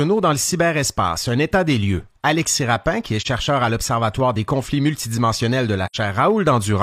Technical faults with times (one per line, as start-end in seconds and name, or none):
3.21-3.27 AAC frame loss with muting
5.86-5.96 AAC frame loss with muting